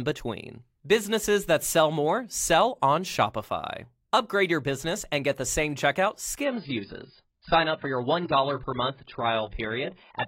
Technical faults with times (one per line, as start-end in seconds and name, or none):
6.43-10.27 adaptive stream at a lower bitrate